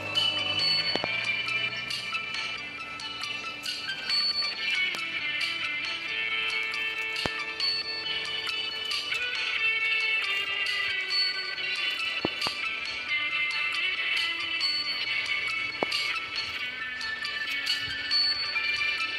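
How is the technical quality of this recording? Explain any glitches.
The recording is marred by loud pops at five points. Two pops in quick succession fall between 0.96 and 1.06 s and again between 12.25 and 12.49 s, with single pops at 4.95, 7.26 and 15.83 s. Each peaks roughly 20 to 25 dB above the surrounding sound. The likely cause is a sudden voltage step or pulse, such as a switch, plug contact, static discharge or driver glitch, added onto the signal. It is heard as a sharp pop or thump while the sound continues underneath.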